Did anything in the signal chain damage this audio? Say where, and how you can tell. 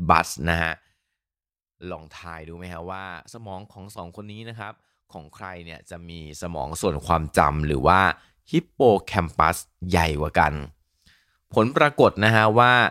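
Yes, there's zipper noise from about 0.46 to 1.07 s, where the level drops by roughly 15 dB. You can hear a fine ticking riding on the speech as it comes down, around 20 ticks a second. That points to a gain stage at the buffer or processing level updating once per block in 1 dB jumps with no ramp between them, so every jump leaves its own small click.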